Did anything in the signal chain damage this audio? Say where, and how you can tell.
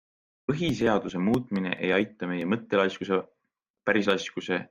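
Yes. A loud pop at 1.56 to 1.58 s sits a few decibels above the speech, which carries on underneath. This single sharp transient points to the analogue wiring stage, likely an electrical spike from a plug, switch or static discharge added directly to the signal.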